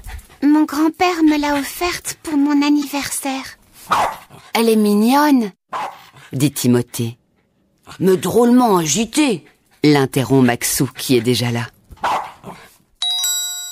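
Around 2.82 to 2.84 s there's a corrupt frame decoded: one damaged compressed frame played anyway, so energy lands at wrong frequencies, giving a short chirp, squeak, blip or burst of noise peaking around -15 dBFS.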